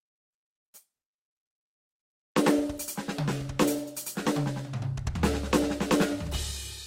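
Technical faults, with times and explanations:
No technical faults, with times or explanations, are present in this music.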